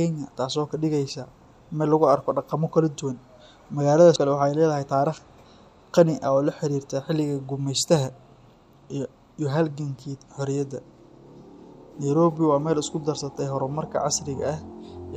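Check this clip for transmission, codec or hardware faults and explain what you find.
There's one fault, compressed frames skipped, at 4.16 s. The speech jumps ahead by roughly a third of a second, which fits about three missing or rejected frames of around 93 ms each. The join is heard as a sudden jump in the speech.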